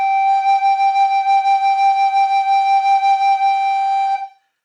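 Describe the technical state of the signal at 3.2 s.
At 3.2 s the music plays through cleanly, with no dropout, distortion, glitch or other technical fault at that point.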